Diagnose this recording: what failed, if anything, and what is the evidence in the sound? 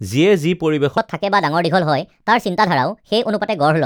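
From 0.98 s on, speech runs 1.35 times fast, roughly five semitones high: a section at the wrong speed, likely a playback clock mismatch.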